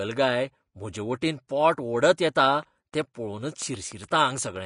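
Across the whole speech clip the treble sounds plainly hissy and grainy, with nothing above about 10.6 kHz. This is Vorbis compression: the codec coarsely quantised the high-frequency detail into noise and lowered the cut-off, which fits a low bitrate of around 35 kbps.

From 2.63 s to 4.57 s, just after "म्हजेवटेन पोट ओडत येता", a train of clicks ticks over the audio at an irregular pace, about ten of them at roughly 5.7 per second, reaching about the level of the speech. The pulses likely come from electrical interference, a faulty connection or a faulty power supply.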